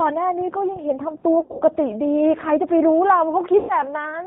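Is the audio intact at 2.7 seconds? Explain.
No. At 2.7 seconds the speech carries G.729 codec damage, and it runs through the whole clip rather than starting there. The codec rebuilds each 10 ms frame from a vocal-tract filter, a pitch predictor and a handful of pulses, which fits an 8 kbit/s G.729A stream. The result is plainly rough and synthetic. A spectrogram shows a flat ceiling with nothing above 4 kHz.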